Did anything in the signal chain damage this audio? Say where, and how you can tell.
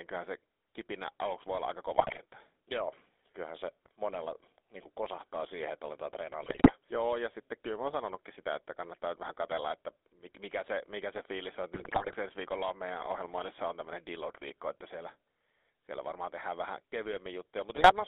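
Yes. The damage happens at the codec stage: the whole clip has been through the GSM full-rate codec. The speech has a buzzy, gravelly roughness. That comes from a vocal-tract model driven by a coarse, regularly spaced pulse excitation, which fits a 13 kbps full-rate stream. On a spectrogram, energy sits between about 300 Hz and 3.6 kHz with nothing above. Harmonics look smeared and grainy rather than cleanly striated.

There are also GSM bit errors from the network stage, where corrupted bits on a weak radio link reached the decoder. They occur at 1.98–2.19 s just after "aluksi voi olla aika", at 6.42–6.73 s after "kosahtaa siihen että aletaan", at 11.74–12.16 s just before "ensi viikolla on meidän", and at 17.76–17.93 s. Each is a burst of squawks and gargling. Bad filter, pitch and gain values warp the spectrum frame by frame. The waveform shows sudden level jumps, and the spectrogram shows blotchy, misplaced formant energy.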